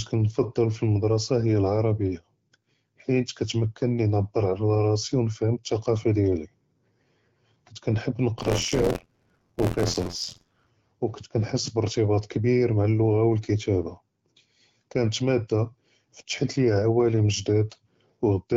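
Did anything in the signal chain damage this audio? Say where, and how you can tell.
Yes. Buffer tearing at the driver or buffer stage runs from 8.38 to 10.69 s. The speech takes on a steady robotic rattle at 86.1 Hz, which fits a 512-sample buffer. It sits only on the signal and never in the gaps. The writer and the reading hardware have slipped out of step, so about a fifth of every buffer replays audio from one lap earlier, roughly 50 ms stale, with a hard splice at each edge. Beneath it, the AMR-WB coding is heard only as light, ordinary codec colouring.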